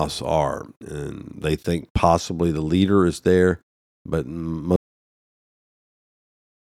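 At 4.76 s the speech cuts off mid-flow and the clip ends in about 2.0 s of silence: an audio dropout to silence. The likely cause is lost input, such as a disconnected device, a failed link or an accidental mute, while recording carried on writing silence. What separates this from a natural pause or a gated fade is the abrupt edge and the complete absence of room tone or hiss through to the end.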